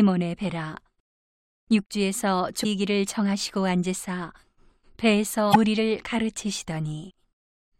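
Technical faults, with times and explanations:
2.60–2.66 s and 5.50–5.56 s, damaged data in a compressed stream. Each event is a brief chirp or squawk in the speech, about 55 to 60 ms long. Corrupted bytes garble those frames. The decoder misreads them, loses sync, then hunts for the next valid frame header.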